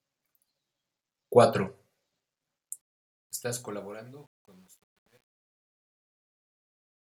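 From about 2.81 s the speech picks up truncation distortion on a fade. The fade-out runs from roughly 2.8 s down to 7.03 s, but the stage doing it is dropping bits without dither, which fits something like a 10-bit path. As the level sinks, the waveform gets chopped into coarse steps. From 3.61 s to the end it's at its worst, turning gritty.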